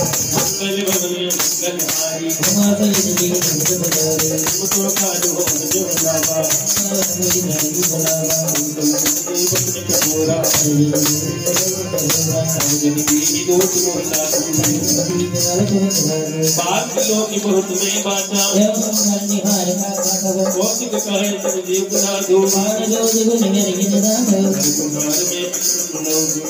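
No technical faults are audible.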